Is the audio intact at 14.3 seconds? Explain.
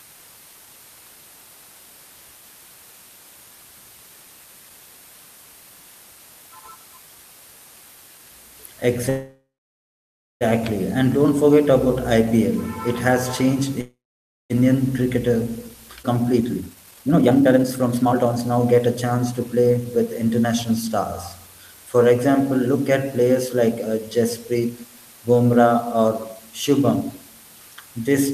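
No. After "has changed", a call audio freeze runs from 13.81 to 14.52 s, so 14.3 s falls inside it. The last sound is carried on briefly and fades, then about 0.54 s of silence follows before the audio resumes exactly where it stopped. Nothing is lost, but a 0.69 s gap has been inserted and everything afterwards arrives that much later. The likely cause is delayed packets leaving the receiver's jitter buffer empty.

The same moment also carries low bit depth with dither, which runs through the whole clip. The sound is reduced to the equivalent of 7 bits, with dither added before rounding. That turns the quantisation error into steady white noise instead of distortion. It is heard as a constant, even hiss roughly 25 dB below the speech, and it is audible on either side of the silent stretch.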